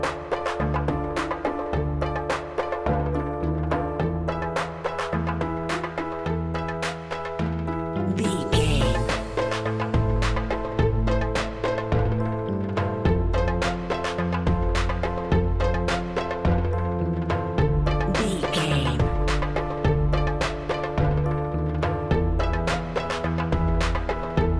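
No technical faults can be heard anywhere here.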